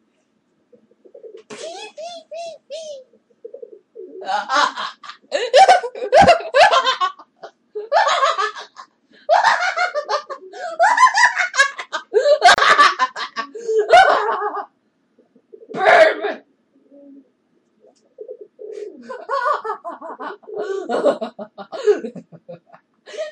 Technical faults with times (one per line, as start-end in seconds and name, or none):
12.54-12.58 gap at a join of encoded pieces